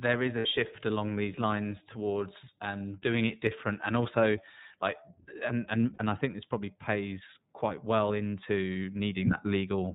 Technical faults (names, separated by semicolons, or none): iLBC codec; lost iLBC frames